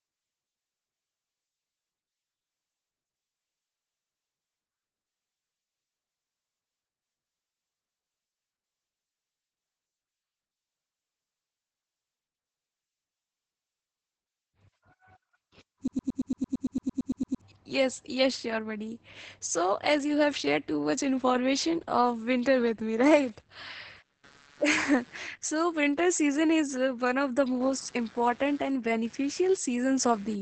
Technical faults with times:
0.00-30.41 Opus voice compression
15.88-17.41 broken-record loop
23.15-30.41 computer activity noise

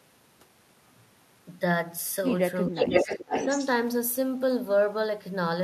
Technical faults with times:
2.68-3.67 echo leak
2.71-2.77 speech suppressed in double talk
3.39-3.51 speech suppressed in double talk

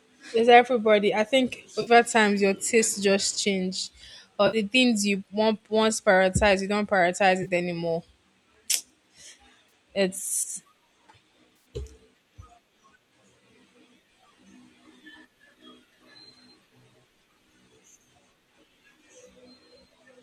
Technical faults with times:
1.81-1.91 AAC frame loss with concealment
4.46-4.57 AAC frame loss with concealment
7.43-7.48 AAC frame loss with concealment
9.69-9.71 AAC frame loss with concealment
11.55-11.65 AAC frame loss with concealment

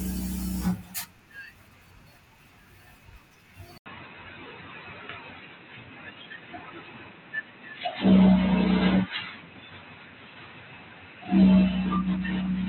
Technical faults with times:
3.78-12.68 input switched to a poorer device

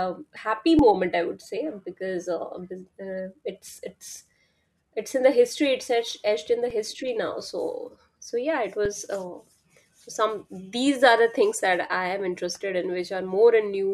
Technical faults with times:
0.35 compressed frames skipped
0.79 underrun with held sample
6.70 underrun with held sample
8.85 underrun with held sample

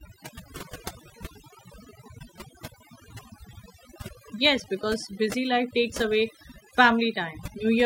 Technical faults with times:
0.00-7.86 overdone noise removal
2.17 damaged data in a compressed stream

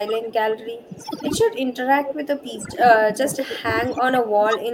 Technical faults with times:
0.00-4.74 overdone noise removal
0.04-1.04 speech suppressed in double talk
0.91-0.97 echo leak
1.46-4.74 speech suppressed in double talk

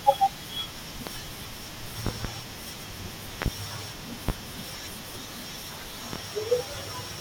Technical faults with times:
1.07-1.11 loud pop
2.07-2.28 loud pop
3.42-3.50 loud pop
4.29-4.32 loud pop
6.13-6.17 loud pop

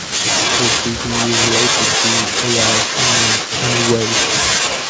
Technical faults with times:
0.00-0.29 speech suppressed in double talk
0.54-1.82 echo leak
2.15-4.89 echo leak

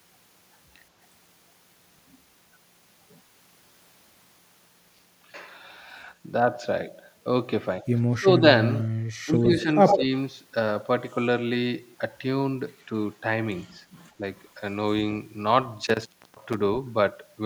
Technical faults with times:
8.10-8.43 speech suppressed in double talk
9.25-9.67 speech suppressed in double talk
9.44-9.48 echo leak
9.87-9.99 echo leak
9.95-10.11 speech suppressed in double talk
12.79-12.85 echo leak
13.62-13.73 echo leak
14.09-14.13 echo leak
15.87-16.54 intermittent contact

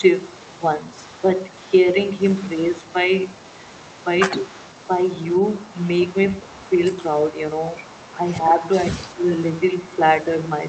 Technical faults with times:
0.00-8.72 echo leak
4.41-4.51 speech suppressed in double talk
8.42-8.63 speech suppressed in double talk
8.95-9.28 speech suppressed in double talk
9.08-10.68 echo leak

